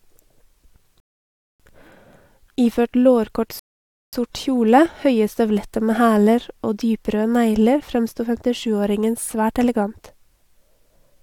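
At 1.0 s and again at 3.59 s, the speech halts in a rebuffering stall. The player ran dry of downloaded audio and waited. Silence lasts about 0.60 s, then 0.53 s, and speech resumes exactly where it stopped.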